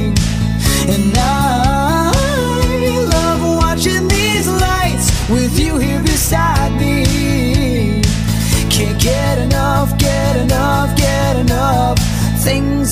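No technical faults can be heard anywhere in the clip.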